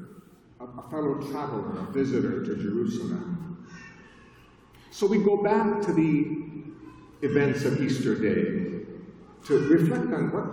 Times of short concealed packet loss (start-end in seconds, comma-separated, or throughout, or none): none